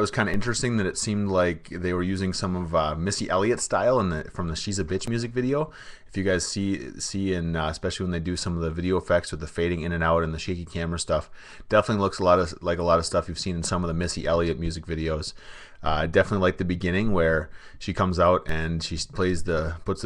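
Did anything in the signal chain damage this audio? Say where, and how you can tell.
Yes, a DC step at the converter or analogue input stage: at 0.34 s and 18.49 s the zero line jumps by about -19 dBFS, then drains away through a 2 Hz high-pass, giving a low thump. Unlike a dropout click, the sound itself continues unbroken.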